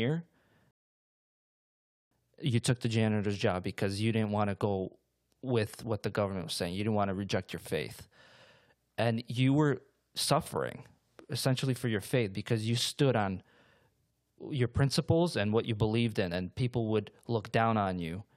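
At 0.71 s the speech drops abruptly into silence and stays silent until 2.11 s, then picks up exactly where it broke off. This is a rebuffering stall: playback exhausted its downloaded audio and waited for more, adding about 1.4 s without losing anything.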